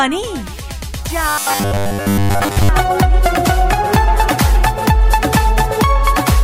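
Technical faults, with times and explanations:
1.29 to 2.69 s, robotic sound from repeated short buffers: the sound turns into a rigid, metallic buzz locked at 100 Hz that still roughly tracks the underlying audio. The cause is likely a playback buffer running dry and being refilled by looping the last 10 ms, with most of the real audio in this stretch skipped. Unlike a stutter, which audibly repeats longer recognisable chunks, the loop here is too short to hear as repetition and becomes a fixed pitch instead.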